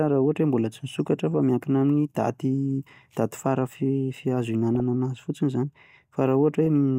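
Between "mbola tsy" and "fa miankina amin'ny daty", 1.13–1.35 s, then at 4.75–4.80 s and 6.66 s, DAB burbling appears as short blips of noise. Sparse bit errors, roughly 0.1 to 0.15 percent, corrupt sub-band samples, so short noise blips appear in single sub-bands instead of dropping to silence as with packet loss.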